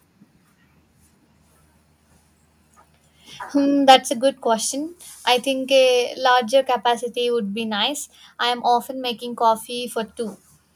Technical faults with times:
3.89-3.95 microphone overload
3.96 microphone volume stepped down

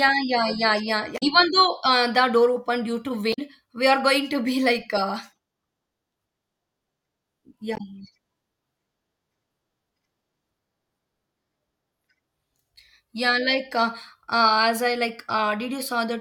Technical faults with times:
1.14-1.23 damaged data in a compressed stream
3.30-3.39 damaged data in a compressed stream
7.74-7.80 damaged data in a compressed stream

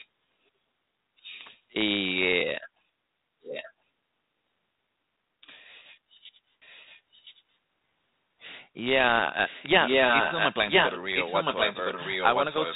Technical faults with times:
0.00-0.07 echo leak
3.42-3.73 echo leak
6.60-7.43 echo leak
9.46-12.75 echo leak

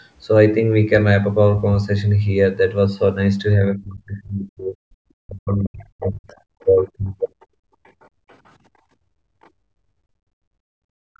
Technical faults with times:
3.57-7.14 speech suppressed in double talk
6.27-8.51 other side's voice leaking through
7.37-11.19 background gated by the echo canceller
9.43-9.48 other side's voice leaking through

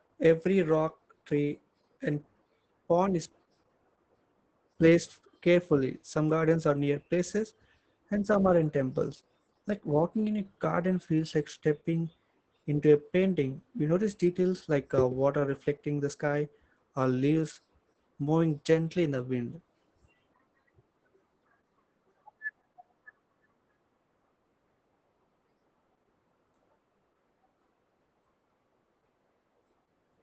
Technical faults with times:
0.00-30.22 Opus voice compression

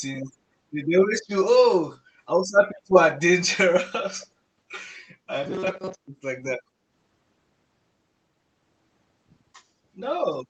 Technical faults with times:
3.14-3.22 echo leak
4.21-4.26 echo leak
5.43-6.08 robotic sound from repeated short buffers

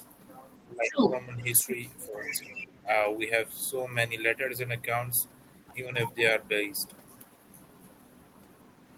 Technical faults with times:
0.00-0.06 speech suppressed in double talk
0.69-1.00 speech suppressed in double talk
0.90-1.73 other side's voice leaking through
1.36-1.67 speech suppressed in double talk
2.08-2.48 speech suppressed in double talk
2.27-2.64 other side's voice leaking through
5.68-5.74 other side's voice leaking through

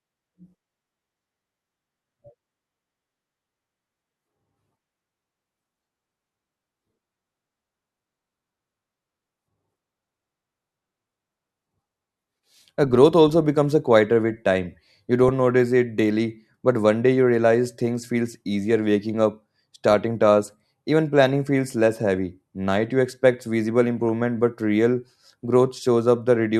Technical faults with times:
15.23-15.29 DAB burbling
19.91-19.94 DAB burbling
23.97-24.05 DAB burbling

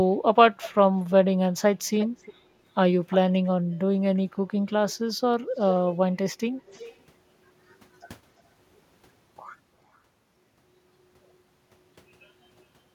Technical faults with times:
1.99-2.34 echo leak
3.10-3.17 echo leak
3.44-3.49 echo leak
4.90-5.11 echo leak
5.58-5.80 echo leak
6.66-6.97 echo leak
9.94-9.98 echo leak

